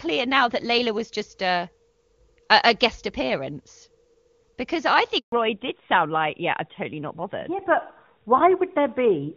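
At 5.18 s a handover gap cuts the speech for 140 ms, until 5.32 s. While the call switched networks no frames arrived, so the sound decays quickly to silence. The waveform shows a flat stretch and the spectrogram a blank vertical band.

From 5.32 s to the end, fallback to narrowband takes hold: the call leaves the wideband codec, whose clean sound points to AMR-WB near its 23.85 kbit/s top rate, for one that fits AMR-NB at 12.2 kbit/s. Nothing remains above 4 kHz, so the sound turns duller and rougher, and the spectrogram's upper band goes abruptly empty.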